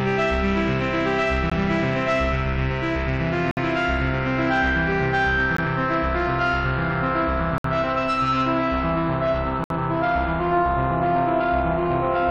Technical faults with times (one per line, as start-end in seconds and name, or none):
1.50 gap between stream segments
3.51-3.57 gap between stream segments
5.57 gap between stream segments
7.58-7.64 gap between stream segments
9.64-9.70 gap between stream segments